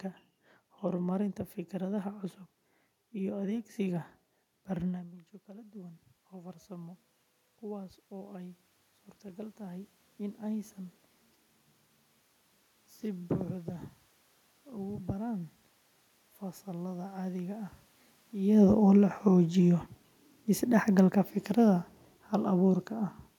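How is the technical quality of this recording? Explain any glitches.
The recording has two level glitches from automatic gain control, both triggered when the talker changes distance from the microphone.

Automatic gain rising runs from 4.91 to 10.78 s. Around 5 s the talker moves away, and the input drops by about 17 dB. The gain control slowly adds about 10 dB to compensate. The voice and the room noise swell together over several seconds.

Automatic gain falling runs from 18.38 to 22.87 s. Near 18.5 s the talker changes distance from the microphone. The gain control then pulls its gain down by about 4 dB. The voice sinks gradually, with the background sinking alongside it.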